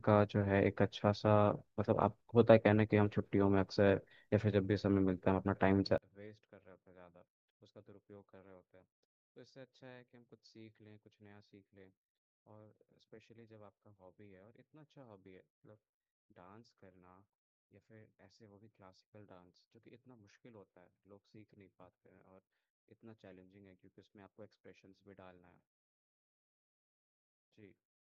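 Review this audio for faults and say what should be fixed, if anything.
From 5.98 s to the end at 28.03 s, one stereo channel has likely been inverted in polarity. When the two channels are summed to mono, the speech they share cancels, so the centred speech drops by about 28 dB. All that remains is a faint residue made of whatever differs between the channels. Flipping the polarity of the inverted channel back should restore the speech. To prevent this, check channel polarity and mono compatibility before export.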